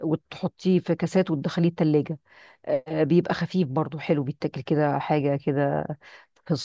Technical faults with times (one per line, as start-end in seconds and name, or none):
none